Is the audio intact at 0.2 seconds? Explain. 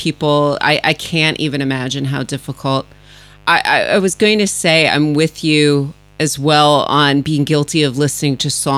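No. At 0.2 seconds, as across the whole clip, the speech carries a mains buzz tied to a 50 Hz supply. Sharp switching spikes, of the kind a dimmer, rectifier or unshielded lead lets in, arrive twice per mains cycle, so the interference is a dense series of 50 Hz harmonics extending up into several kHz. It sits roughly 30 dB below the speech and is heard as a steady, raspy buzz under the voice.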